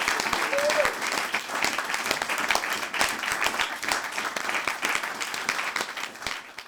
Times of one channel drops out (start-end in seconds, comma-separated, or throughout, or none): 1.39-1.44, 4.38-4.44